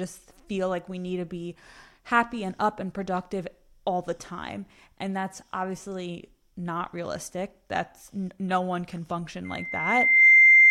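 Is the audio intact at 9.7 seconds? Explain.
No. From 9.45 to 10.70 s a 2.1 kHz tone swells within a second into a shrill squeal well above the speech: loudspeaker feedback squeal, the microphone re-amplifying its own loudspeaker.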